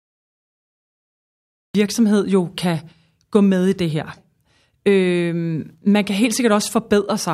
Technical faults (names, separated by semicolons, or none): cut-off start